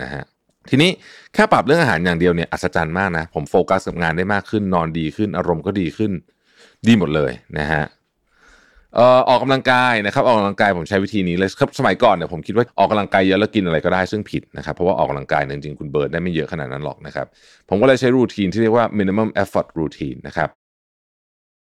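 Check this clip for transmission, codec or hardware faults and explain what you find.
Nothing amiss can be heard in the signal of this speech recording, and the smooth fade-out that starts at about 20.5 s and is complete by 20.56 s is an ordinary editing fade, not a fault.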